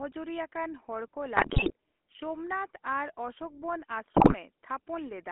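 The whole clip runs through a GSM full-rate codec. The band sits roughly between 250 Hz and 3.5 kHz, and the speech carries that buzzy, gravelly grit from a vocal-tract model fed with sparse pulses, consistent with the old 13 kbps full-rate coder.

Then GSM bit errors hit twice, from 1.36 to 1.72 s and from 4.14 to 4.35 s. Corrupted filter, pitch and gain values reach the decoder, so the speech squawks, pops and gargles, which fits a few percent of bits flipping on a weak link.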